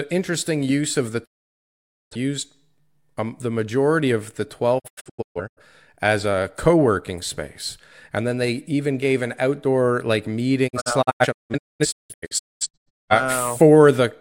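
Speech cuts to silence at 1.24–2.17 s, then breaks into scattered holes at 4.78–5.62 and 10.67–13.13 s: digital broadcast dropout, the receiver muting over failed frames.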